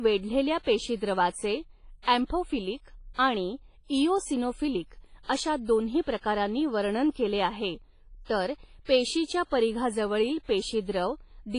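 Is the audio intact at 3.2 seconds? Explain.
No. Just before 3.2 seconds, from 3.14 to 3.18 s, there is pre-echo: a short hiss rising ahead of a sharp attack, spreading back about 47 ms and softening the onset. The codec spreads quantisation noise evenly across a transform block, so when a loud attack falls late in the block, noise sized for that attack also fills the quiet stretch before it. The result is a smeared, blurred leading edge rather than a clean start.

The pre-echo sits on top of damage that runs through the whole speech clip. The speech has a ringing, washy texture with hiss that swells and fades with the signal, and nothing is present above 10.1 kHz. This is heavy WMA compression, likely from an encoder working at a low bitrate, consistent with roughly 24 kbps. At that rate, weak spectral lines are zeroed and long blocks smear the quantisation noise across tens of milliseconds.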